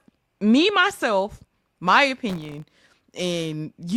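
Right after "me myself my", from 2.30 to 2.89 s, a gritty crackle tears through the speech for about 0.6 s and then stops. This is processor overload crackle: the processor fell behind on very short audio buffers, each well under a millisecond, and missed dozens of deadlines in quick succession. Every miss dropped a sliver of silence into the signal with hard edges, and that rapid run of tiny gaps produces the rough, crackling texture.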